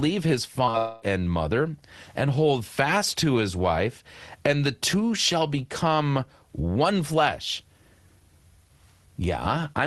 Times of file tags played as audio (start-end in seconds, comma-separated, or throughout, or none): none